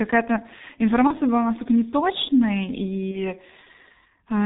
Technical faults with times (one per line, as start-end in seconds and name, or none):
0.00-4.45 G.723.1 codec
1.07-1.14 VoIP packet loss concealed by the speech codec
3.11-3.32 VoIP packet loss concealed by the speech codec